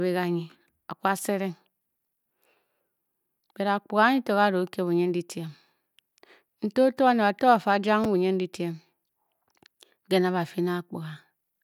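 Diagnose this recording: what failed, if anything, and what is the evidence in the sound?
At 8.04 s the speech is briefly jumbled because of chunks out of order at the driver or buffer stage. A 5.33 ms chunk was written one chunk late and swapped with its neighbour. The waveform shows three abrupt discontinuities, and the spectrogram shows thin vertical broadband lines at those joins.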